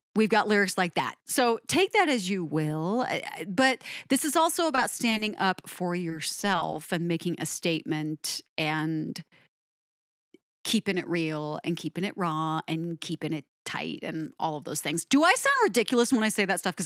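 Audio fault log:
4.75–5.21 s, repeated packet loss (robotic sound): Right after "but this is also" and before "up for", the speech breaks up four times in under half a second. Each hole is bridged by extending the preceding sound, which accounts for about 60 ms of synthetic fill, while about 20 ms is simply gone. The longest single gap is 20 ms, and roughly an eighth of the stretch is concealed, giving a choppy texture with fragments missing.
6.09–6.74 s, repeated stalls (stutter): Between "up for" and "and making a", playback hesitates four times as late-arriving data lets the jitter buffer run dry. At each stall the receiver holds the last sound until fresh audio arrives, adding about 50 ms of fill in total, none of it longer than 20 ms. No speech is lost here. Instead the phrase drags and stutters, with roughly 8% of the span made up of stretched audio.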